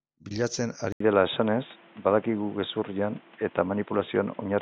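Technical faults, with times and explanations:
0.92 s to the end, input switched to a poorer device: after an 80 ms gap the speech loses everything above 3.8 kHz and turns boxy. The level shifts by around 5 dB over new background noise about 30 dB down, likely from a changeover to a narrower-band microphone.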